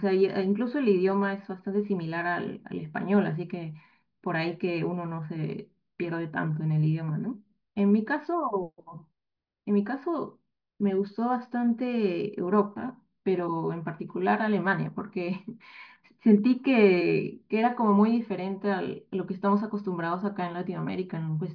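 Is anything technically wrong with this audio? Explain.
No, nothing technically wrong can be heard in this audio. The speech recording carries no audible technical fault at any point.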